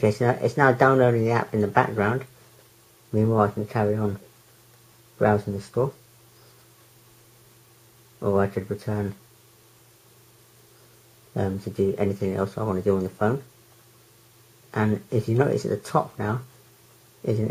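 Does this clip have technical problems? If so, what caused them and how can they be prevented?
No, no faults are audible.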